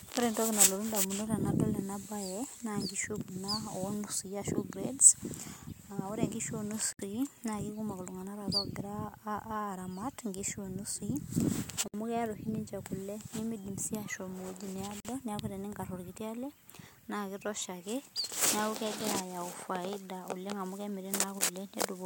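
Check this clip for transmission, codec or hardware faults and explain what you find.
Three gaps at joins of encoded pieces interrupt this speech clip, at 6.93 to 6.99 s (about 65 ms), 11.88 to 11.94 s (about 59 ms) and 15.00 to 15.05 s (about 47 ms). Separately encoded segments were spliced with their start delay and end padding left in, so the speech abruptly drops out, then resumes exactly where it stopped.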